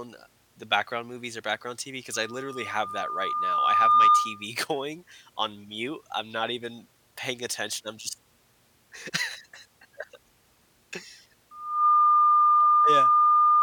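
A microphone is picking up the loudspeaker it feeds, and at around 1.2 kHz the loop gain exceeds one, producing loudspeaker feedback squeal. From 2.13 to 4.46 s a single tone swells over about two seconds to roughly 15 dB above the speech, stopping just before "going on mute I'm". From 11.51 s it returns at the same pitch, climbing in under half a second and howling through to the end of the clip.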